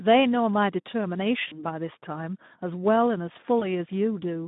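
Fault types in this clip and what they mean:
Speex codec: low-rate CELP coding, around 11 kbps, leaves speech hoarse and noisy within a narrow band of roughly 150 Hz to 3.7 kHz.
VoIP packet loss concealed by the speech codec: lost packets near 1.47 s and 3.59 s replaced by fading extrapolation of the voice, with distortion lingering briefly after recovery.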